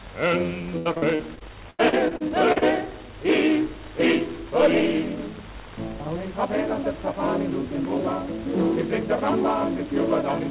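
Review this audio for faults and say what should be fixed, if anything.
Repeated packet loss (robotic sound), 0.78 to 2.64 s: recurring gaps up to 82 ms are patched by extending the previous sound, leaving choppy dropouts. Stabilise the network link and allow a larger jitter buffer so late packets still arrive in time for playback.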